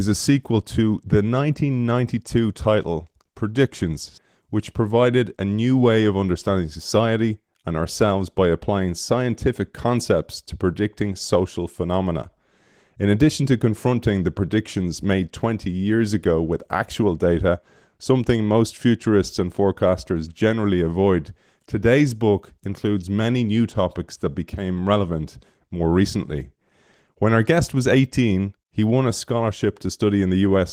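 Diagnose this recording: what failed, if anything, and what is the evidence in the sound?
Nothing failed; no stage in this chain shows a fault.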